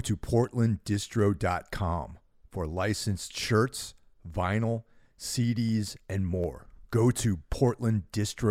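From 0.19 s to 8.44 s, something in the system stalls the USB bus or audio driver every 0.25 s, a periodic USB or driver dropout. Each stall skips a tiny sliver of the speech, a small fraction of a millisecond, with nothing put in its place. The waveform jumps across each gap, so the speech carries a steady ticking at four per second, around thirty ticks in all, heard only while sound is present.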